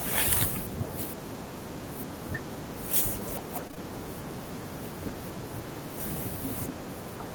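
A USB whine runs through the whole speech clip: bus current leaking into the audio as a fixed 1 kHz tone, strongest at its 3 kHz harmonic, about 35 dB below the signal, drawn as steady horizontal lines on a spectrogram.

At 3.67, 3.71 and 3.75 s, ending 3.78 s, short concealed packet loss strikes: three consecutive 20 ms packets missing, patched by extending prior sound, heard as a smear. The spectrogram shows smoothed, stretched spectra.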